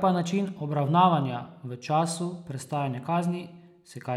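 No technical faults can be heard anywhere in the recording, and the speech signal stays intact and continuous throughout.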